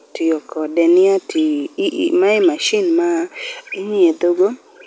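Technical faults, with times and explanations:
No technical faults found; the speech carries the band limit of a wideband call codec path, with nothing above 8 kHz, which fits G.722.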